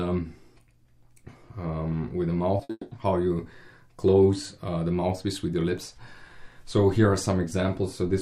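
At 2.57 to 2.61 s there is a short concealed packet loss: about 20 ms of audio failed to reach the decoder in time, and the receiver patched the gap by extending the preceding sound. It comes across as a brief smear before normal audio resumes.

Right after, from 2.63 to 2.71 s, a burst of packet loss removes about 60 ms. The decoder carries the last sound forward while attenuating it, so the passage becomes a held, fading tone or hiss, and the lost audio is skipped.

From 2.71 to 2.93 s the sound gives way to a longer fading continuation of about 200 ms that ends in roughly 30 ms of silence, after which audio returns further on with that stretch missing. This is likely a long network dropout.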